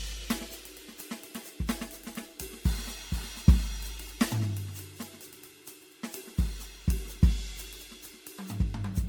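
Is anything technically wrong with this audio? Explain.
Yes. Generation loss runs through the whole music clip. It sounds swirly, smeared and hollow. Attacks blur, and nothing remains above 19.9 kHz. The sound points to MP3 near 96 kbit/s, likely re-encoded about ten times. Each pass requantised on a shifted frame grid, piling up noise and spectral holes.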